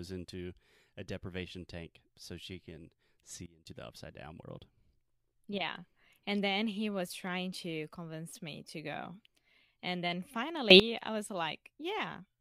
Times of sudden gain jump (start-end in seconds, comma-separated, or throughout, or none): 3.46-3.67, 10.70-10.80